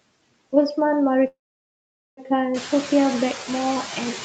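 Noise suppressor artifacts run through the whole speech clip. Steady noise is pulled down by about 21 dB between words. It rises under them.

A call audio freeze occurs from 1.27 to 2.19 s. A brief fading buzz or hiss gives way to about 0.8 s of silence. Speech then resumes where it stopped, now about 0.9 s late, with nothing lost. Packets held up in transit, emptying the jitter buffer, are the likely cause. The room noise that swells at about 2.5 s is part of the recording.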